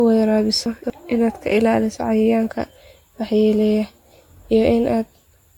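From start to finish the speech sounds swirly, smeared and hollow, with consonant attacks blurred and nothing above 18.8 kHz. This is generation loss, likely from the audio being decoded and re-encoded with AAC-LC about four times, each pass quantising on a shifted frame grid so the damage compounds.

Between 0.66 and 0.90 s there is a brief garbled, jumbled moment. These are chunks out of order: a 60 ms chunk plays after the material that should follow it, which fits it arriving about three chunks late. Nothing is missing, only misplaced.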